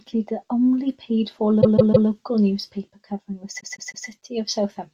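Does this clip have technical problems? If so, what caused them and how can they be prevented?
Yes. Repeated frames: a block of compressed frames was written or sent again, so the decoder replays a short stretch. In this speech, a roughly 157 ms chunk plays three extra times from 1.61 to 2.08 s, just before "newspaper covering", and again from 3.59 to 4.06 s, just after "newspaper covering". Each adds about 0.47 s of stutter. Preventing it means checking frame sequence numbers in the writer or transport and dropping duplicates before decoding.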